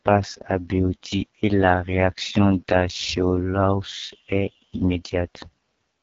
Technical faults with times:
0.00-6.03 AMR wideband (HD Voice) codec

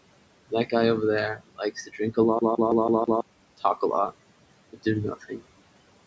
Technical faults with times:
0.00-6.06 noise suppressor artifacts
1.36-1.60 speech cut by the noise suppressor
1.86-2.17 speech cut by the noise suppressor

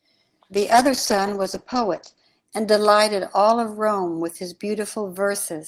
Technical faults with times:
0.54-2.31 call bitrate drop

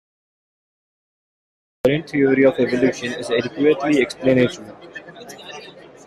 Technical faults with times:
0.00-1.85 cut-off start

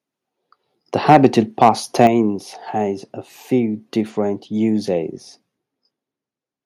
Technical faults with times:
1.09-1.27 microphone overload
1.61-1.69 microphone overload
1.99-2.07 microphone overload
2.07 microphone volume stepped down

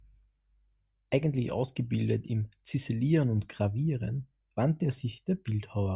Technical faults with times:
none

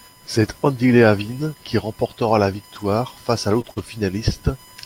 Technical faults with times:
0.00-4.85 USB whine
2.75-2.85 lost packet rebuilt from error correction
3.61-3.78 short concealed packet loss
3.66-3.80 lost packet rebuilt from error correction

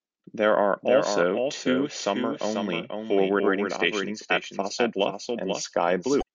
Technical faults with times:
0.00-6.35 doubled audio track
0.00-6.35 MP3 compression
3.39 damaged data in a compressed stream
6.18-6.23 damaged data in a compressed stream

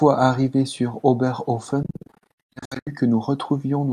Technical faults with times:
1.83-2.89 Bluetooth dropout

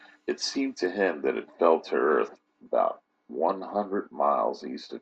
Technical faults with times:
0.86-5.01 de-emphasis applied wrongly

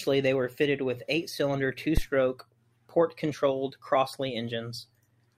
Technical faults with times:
1.97-2.04 phantom power thump

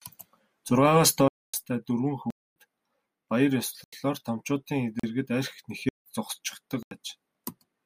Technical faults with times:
1.28-1.54 block of digital silence
2.30-2.56 block of digital silence
3.84-3.93 block of digital silence
4.99-5.03 block of digital silence
5.89-6.06 block of digital silence
6.83-6.91 block of digital silence

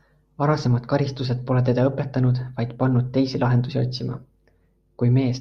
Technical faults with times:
none

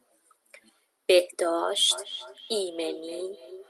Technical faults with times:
1.91-3.70 feedback echo between two devices

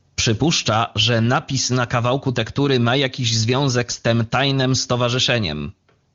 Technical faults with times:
none

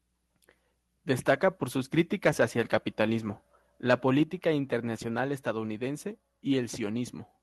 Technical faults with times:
1.98-3.01 microphone overload
3.89-3.94 microphone overload
4.23 microphone volume stepped down

